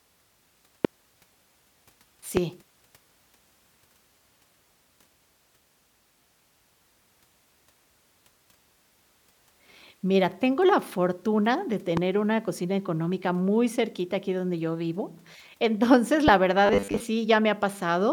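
Loud pops occur at 0.85–0.87 s, 2.37–2.39 s, 11.97–11.99 s (between "tengo la fortuna de" and "una cocina económica muy") and 16.28–16.30 s. Each is a single sharp thump, about 15 dB above the speech, and about 10 dB at 11.97 s. The likely cause is a brief voltage pulse from a switch, static or driver glitch, while the speech continues underneath.

Robotic sound from repeated short buffers follows at 16.66–17.00 s. Fresh audio stops arriving in time, so a short chunk is replayed in place of most of the real signal. The repetition imposes a rigid 100 Hz metallic buzz, which fits a roughly 10 ms buffer.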